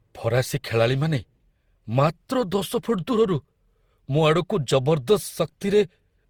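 Generation loss runs through the whole of this speech recording. The sound is swirly and hollow, with smeared consonant attacks and a watery, shifting texture, though the band still extends to about 20.2 kHz before cutting off. The likely cause is repeated lossy re-encoding, around ten passes, each requantising on a shifted frame grid so that noise piles up. The character points to an Opus chain at 64 kbit/s.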